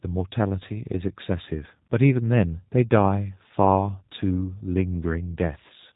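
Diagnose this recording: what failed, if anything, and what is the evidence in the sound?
The failure is at the codec stage: the speech has been through G.729 coding for the whole clip. Nothing reaches above about 3.8 kHz, and the voice has a plainly audible rough, slightly synthetic grain. A plain narrowband channel alone would sound dull but clean. This grain comes from rebuilding each 10 ms frame from a vocal-tract filter, a pitch predictor and a few pulses. That behaviour fits an 8 kbit/s G.729A encode.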